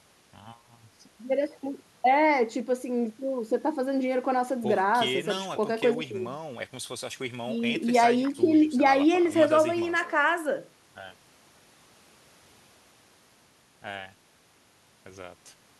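Speech recording, nothing wrong with it technically: no audible faults at any point.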